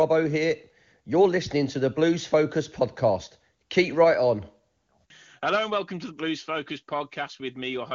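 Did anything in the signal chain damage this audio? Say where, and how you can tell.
No, nothing in the signal chain damaged this speech.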